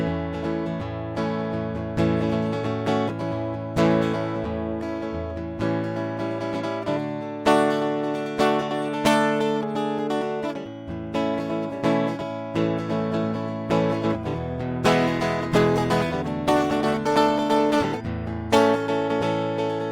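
A call bitrate drop begins at 12.54 s in this music clip and lasts to the end. The call's bandwidth estimate fell, so the encoder was told to cut its rate from 96 kbps to 28 kbps and stays at the lowest rate for about 5.6 s. At that rate Opus codes the music far more coarsely and trims the high frequencies, so the sound turns duller and rougher, with no recovery before the clip ends.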